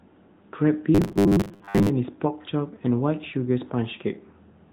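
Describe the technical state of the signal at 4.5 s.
At 4.5 s the speech is still passing through the AMR narrowband mobile codec heard across the whole clip. A vocal-tract model rebuilds it at 8 kHz sampling, cutting everything above 4 kHz. The plainly buzzy, synthetic edge fits a mid-rate mode near 10 kbps.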